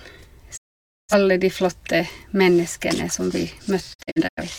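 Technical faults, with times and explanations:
0.56–1.14 s, digital broadcast dropout: the receiver stopped getting usable frames and muted, fading down over 20 ms into a solid silence. About 512 ms of programme is gone rather than delayed, and the speech picks up mid-stream once good frames return.
3.93–4.43 s, digital broadcast dropout: reception faltered intermittently, so the decoder muted and recovered several times. Speech breaks into short holes, the longest 85.3 ms, adding up to 213.3 ms lost across 426.7 ms, each with a 20 ms fade.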